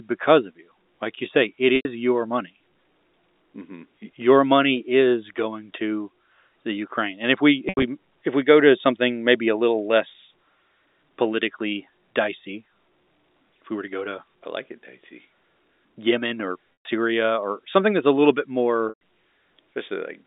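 Speech heard over a narrowband telephone path, band-limited to roughly 250 Hz–3.7 kHz by G.711 A-law coding at 64 kbps, with four dropouts from packet loss with pitch repetition. The first falls at 1.76–1.85 s, about 90 ms lost between "like you say it" and "your money". The second is at 7.69–7.83 s, about 100 ms scattered over 140 ms with a longest run of 80 ms, between "if we" and "if we go to". The third is at 16.75–16.85 s, about 120 ms lost. The fourth starts at 18.89 s, just after "that's a little bit", also about 120 ms lost. In each gap the receiver loops the last pitch period, so the sound briefly holds with a buzzy tone, fades out over about 50 ms, sits silent, then cross-fades back in. The loss sizes suggest packets of about 10 ms.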